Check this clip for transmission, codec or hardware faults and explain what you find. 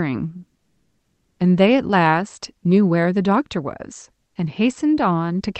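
One fault stands out in this speech clip: comfort noise in place of the background, from 4.27 to 4.35 s, lasting 80 ms. During that pause the sender likely stopped transmitting under discontinuous transmission (DTX), and the receiver filled the gap with synthetic noise roughly matched to the room. The real background, about 54 dB below the loudest speech, gives way to a flat, detail-free hiss about 4 dB quieter. Unlike a dropout or noise gate, the pause never falls to true silence. The band-limited sound of the call codec, reaching to about 8 kHz, runs through the whole clip.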